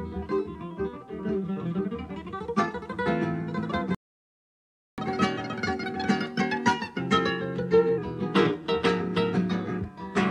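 The audio stops dead at 3.95 s and stays silent until 4.98 s, a gap of about 1.03 s. This is a playback stall: the sound breaks off mid-flow and later resumes. The likely cause is the player's buffer running dry or its output thread being blocked, so nothing reached the output until it recovered. From 4.98 s to 7.98 s the sound runs fast, at 1.1 times normal speed, with pitch raised by roughly one and a half semitones. This is catch-up at higher speed: the player resamples its accumulated backlog to make up the time lost in the stall, so tempo and pitch rise together. At 7.98 s both drop back to normal.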